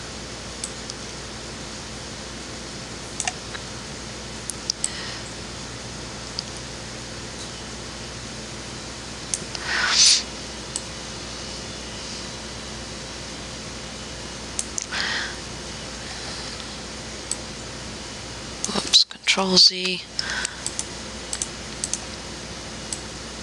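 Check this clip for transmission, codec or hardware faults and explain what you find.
There's gain pumping running through the whole clip. The gain swings by around 5 dB, so loud and soft parts get squashed together. Likely cause: input gain set far too high, with a fast limiter clamping down.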